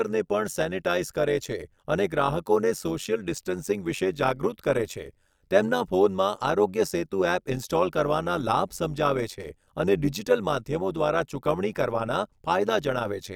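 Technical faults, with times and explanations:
Throughout, overlap-add ripple: the speech carries a fast, buzzy flutter, a rough robotic tremolo riding on every sound, with the level pumping up and down by about 11 dB at a rate of around 100 times a second. The audio was split into overlapping windowed frames and rejoined with an overlap whose windows do not add up to a steady gain, so loudness swells and dips once per frame, which fits a frame rate near 100 Hz.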